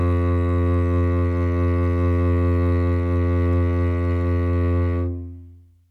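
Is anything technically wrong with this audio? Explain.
No, nothing is technically wrong with this music audio.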